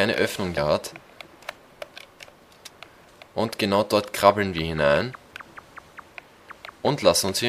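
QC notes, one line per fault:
0.56 s, damaged data in a compressed stream: a brief glitch that comes across as a chirp, squawk, click or short hole in the sound. A stretch of corrupted bytes left the decoder unable to read those frames, so it lost sync and skipped ahead to find the next valid frame header.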